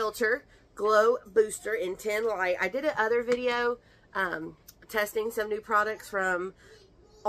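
No technical faults are audible anywhere in the clip.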